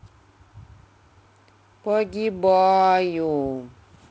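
Speech, with no technical faults to report.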